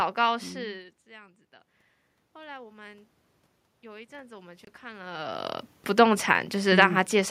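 From 2.32 to 3.11 s there's automatic gain rising: the input level falls by about 21 dB, so the gain control creeps up about 3 dB, and the voice and room noise swell together. It does the same again from 3.81 to 5.51 s, this time climbing about 6 dB.

In the middle of that second rise, at 4.65 s, there's a block of digital silence, a 25 ms hole where the output cuts to silence with no fade. You hear it as a short gap, which points to the output buffer not being filled in time.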